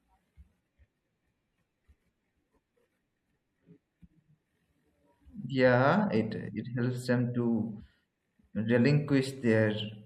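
From the first second to the end, the speech carries a watery, swirly quality, with s sounds turning metallic and the top end noticeably dulled. That's likely MP3 compression at a low rate, something in the region of 64 kbps. The encoder runs short of bits, so it chops off the treble and lets weaker frequency detail flicker in and out from one frame to the next. That flicker is the swirl you hear.

At 0.59 s and again at 7.79 s the audio suddenly jumps forward, and each time roughly 150 ms of sound simply never plays. Those are compressed frames skipped. A block of several 24 ms frames either went missing or got thrown out by the decoder as damaged, so playback picks up further along. Neighbouring MP3 frames overlap, which is why each join comes across as a short smeared blip rather than a sharp click.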